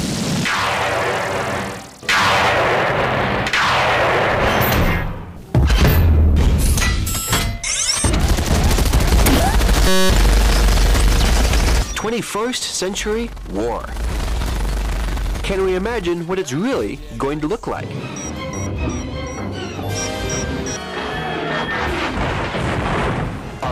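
At 9.88 to 10.10 s the audio collapses into a steady buzz at about 188 Hz, a system hang loop: the driver stalled while the hardware kept replaying one 5.33 ms buffer, which fits a 256-sample buffer, dozens of times over.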